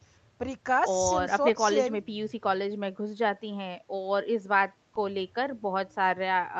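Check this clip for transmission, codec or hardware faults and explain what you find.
No transmission, codec or hardware faults show up in this clip.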